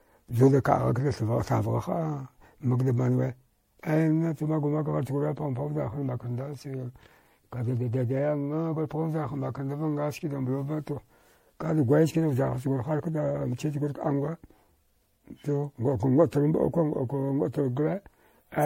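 Throughout the speech, the sound is swirly, smeared and hollow, with blurred consonant attacks, likely generation loss from repeated MP3 encoding, perhaps seven passes at a setting near 64 kbit/s. A spectrogram shows nothing above 16.5 kHz and patchy, flickering holes across the band.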